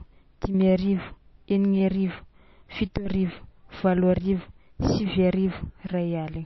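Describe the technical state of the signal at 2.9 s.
At 2.9 s the speech sounds dull and watery, as it does throughout the clip. Nothing reaches above 5.8 kHz. Weak detail swirls and flickers from moment to moment. This is likely MP3 compression, at a low bitrate near 27 kbps. The encoder cut the treble and dropped quiet frequency lines to save bits.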